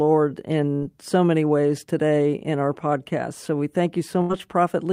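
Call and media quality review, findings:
Burst of packet loss at 0.75 to 0.84 s, just before "so many ways today": a 63 ms concealment tail, the last sound held and fading out, then about 60 ms of sound skipped. Jitter buffer or network path. Second burst at 4.22 to 4.31 s: a 75 ms concealed tail, then an 80 ms jump ahead. Unlike a hard dropout to silence, the gap is filled by a decaying copy of the preceding sound, and the resumed audio starts further along rather than where it stopped.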